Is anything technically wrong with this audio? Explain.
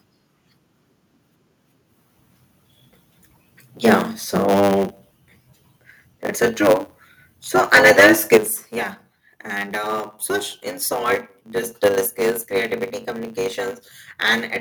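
Yes, there are three faults.

Throughout, the speech carries a steady 100 Hz buzz and runs about 1.07 times fast at roughly normal pitch. This is a block size mismatch (truncated): one stage writes longer blocks, which fits a 512-sample size, than the next reads, so each block's tail is discarded.

From 7.73 to 8.37 s, the loudest syllables turn harsh and crackly, with peaks pushing about 6 dB past the limit and a small share of samples flattened. This is likely microphone overload, with input volume set too high for the converter.

At 8.37 s, voice and background together drop suddenly by about 8 dB, right after the distorted stretch. This is the microphone volume stepped down, likely the call software reacting to the clipping by lowering the device's input gain in a single step.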